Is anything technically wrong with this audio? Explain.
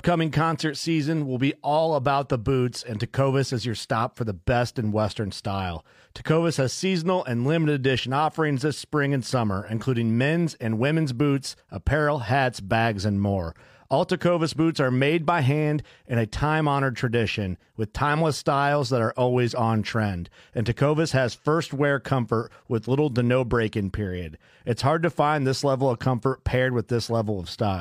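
No, nothing is technically wrong with this audio. The speech recording shows no technical problem that needs attention.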